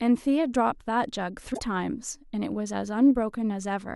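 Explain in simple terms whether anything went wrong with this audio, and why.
Something did go wrong, at about 1.50 to 1.60 seconds into this speech recording. For roughly a tenth of a second, part of the compressed file was damaged, a fault called damaged data in a compressed stream. The player couldn't make sense of those bytes, lost its place, and had to hunt for the next readable chunk, so you hear a brief disturbance there, such as a chirp, squawk, click or short hole.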